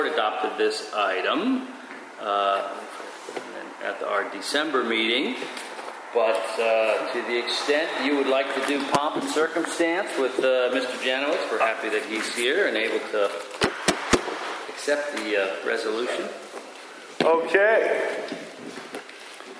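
Nothing in the sound stood out as a technical problem on listening.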